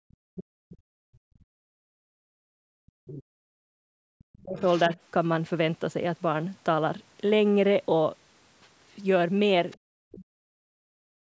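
Right from the start, 0.0 to 2.55 s, then 2.77 to 3.43 and 3.88 to 4.62 s, the speech keeps dipping by up to about 40 dB. That's speech suppressed in double talk, likely the echo canceller ducking everything while both sides talked. At 4.59 to 4.96 s you hear the other side's voice leaking through, about 25 dB under the speech. A faint scrap of leakage returns at 9.71 to 9.78 s, about 30 dB down. The canceller probably left some loudspeaker echo in the mic. From 9.84 to 11.02 s the speech gets squashed again in double talk. Right at the end, 11.3 s, the background is gated by the echo canceller, dropping about 40 dB for roughly 40 ms.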